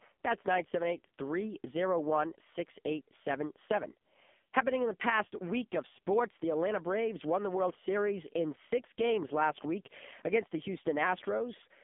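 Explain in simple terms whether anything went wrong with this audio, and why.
The speech passed through an AMR narrowband mobile codec at a very low setting. The whole clip sounds thin, muffled, buzzy and synthetic, with nothing above 3.7 kHz.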